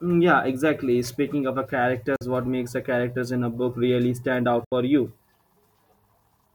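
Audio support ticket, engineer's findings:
Two silent gaps in speech, 2.16 to 2.21 s (about 46 ms) and 4.64 to 4.72 s (about 70 ms). Abrupt edges or a few-ms fade, audio resumes mid-stream as if it had kept playing, with nothing delayed or repeated, unlike an underrun stall. Likely Bluetooth dropout, with gap lengths that fit two and three lost packets.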